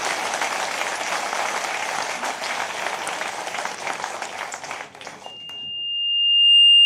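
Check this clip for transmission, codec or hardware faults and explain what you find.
One fault is present, a loudspeaker feedback squeal. From 5.24 s to the end of the clip, a 2.8 kHz tone swells over about a second and a half to roughly 15 dB above the sound. The microphone is picking up its own loudspeaker, and at that frequency the loop gain exceeds one, so the tone keeps reinforcing itself.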